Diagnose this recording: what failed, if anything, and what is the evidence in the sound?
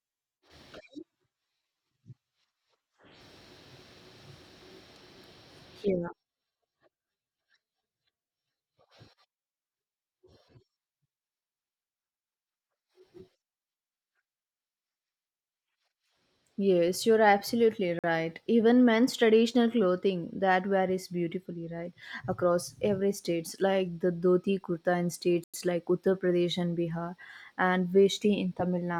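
The speech drops to silence twice: for 47 ms at 17.99 s and for 98 ms at 25.44 s. Each time it then resumes. This is likely a Bluetooth stall on the wireless playback link. Delayed packets emptied the headphone buffer, so output paused until resent packets arrived.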